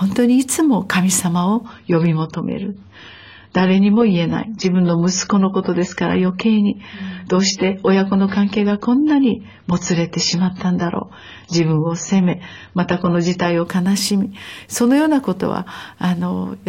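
From 1.65 s to 13.65 s the speech switches, without any gap, to an adaptive stream at a lower bitrate, which fits a drop from 96 to 16 kbit/s AAC. Codec artefacts rise, and a spectrogram shows everything above 7 kHz sharply cut off between both edges.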